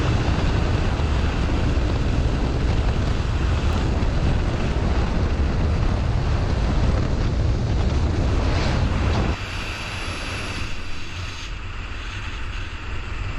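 A recorder or processor working in 5-second chunks likely dropped roughly 50 ms at each chunk changeover, so this audio has missing audio between chunks at 3.73 s and 8.68 s, where the sound skips abruptly forward with no silence bridging the joins.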